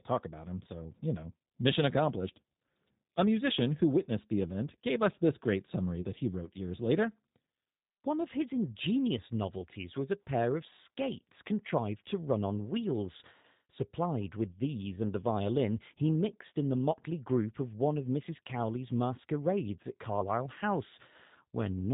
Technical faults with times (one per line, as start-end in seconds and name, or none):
0.00-21.93 G.729 codec
6.02-6.06 VoIP packet loss concealed by the speech codec